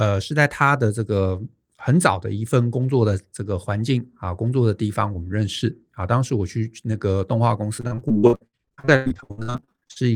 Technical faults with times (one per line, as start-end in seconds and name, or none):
7.77-10.03 repeated packet loss (robotic sound)